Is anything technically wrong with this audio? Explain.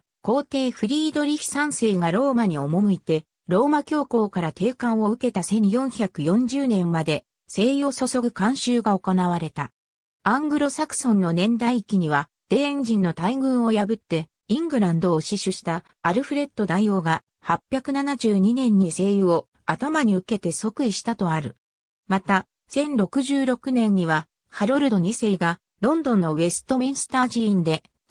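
Yes. Throughout the clip, slight hiccups recur at uneven intervals, a small jolt in the flow each time. This is clock drift between sender and receiver: the sender's clock runs around 5 percent fast, so the receiving jitter buffer keeps overfilling and has to shed audio.

From 0.02 to 28.02 s, the tempo feels subtly unsteady, with tiny skips rather than stretches. These are repeated timing corrections: to keep pace with material arriving at 105% speed, the receiver repeatedly cuts short slices out, each edit small and unevenly spaced.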